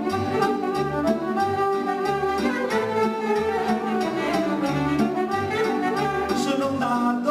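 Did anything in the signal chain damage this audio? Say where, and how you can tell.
No, nothing in the chain stands out here, and I can't point to any stage where this audio picked up damage.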